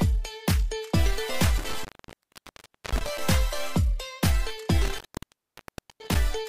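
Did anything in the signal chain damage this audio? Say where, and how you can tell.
Yes. The damage is in the analogue wiring, from an intermittent contact. The audio drops out twice, once between 1.58 and 3.18 s and again between 4.81 and 6.17 s. Each time the line stays open for roughly a second, about 1.09 s and 1.02 s. Crackle marks the edges where the contact breaks and remakes. A loose plug or cable is briefly losing connection, so the signal vanishes rather than fading.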